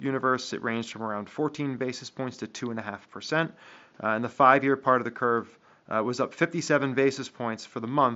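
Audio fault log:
The speech sits about 39 dB above a low room-noise floor and passes through a wideband mSBC Bluetooth headset link that carries content up to 8 kHz, with no fault to report.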